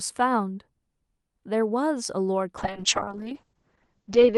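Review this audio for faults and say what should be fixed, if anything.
From 2.59 s to the end, the speech turns rough and muffled, with the top end cut from 12 kHz to 8 kHz. This is a call bitrate drop: the sound points to the Opus encoder falling from about 48 kbps to around 7 kbps for 1.75 s. To prevent it, give the call more stable headroom in its network bandwidth so the encoder is not forced down this far.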